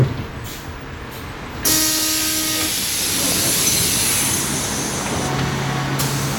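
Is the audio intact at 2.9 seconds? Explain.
Yes, the audio is intact at 2.9 seconds, with no fault to be heard at that moment.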